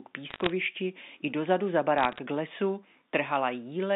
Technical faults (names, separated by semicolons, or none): bit errors on a digital phone line